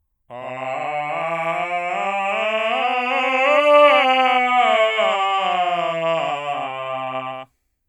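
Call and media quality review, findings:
Doubled audio track, throughout: likely a second, slower capture path mixed in, adding a full-band copy of the music about 100 ms late at roughly equal level.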